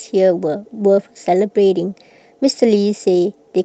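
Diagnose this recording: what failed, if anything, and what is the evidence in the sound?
Nothing failed; the call path behaves as expected.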